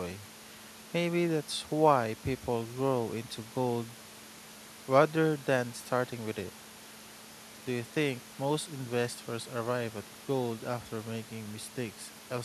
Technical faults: none

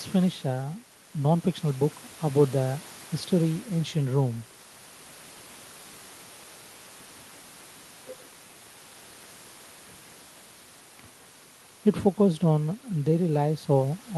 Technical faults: none

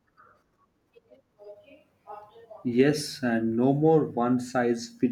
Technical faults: none

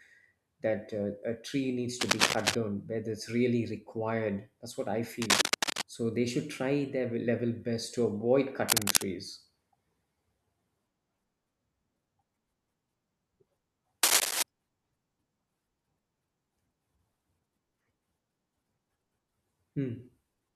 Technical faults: cable scratch noise

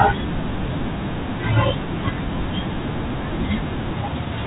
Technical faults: none

